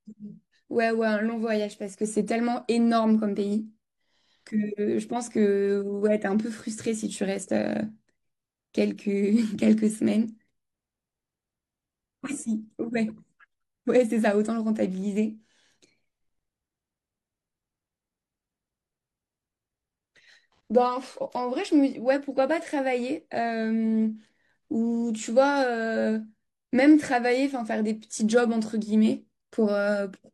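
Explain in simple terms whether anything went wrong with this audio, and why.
Nothing went wrong with this audio, because no technical fault can be heard anywhere in the speech.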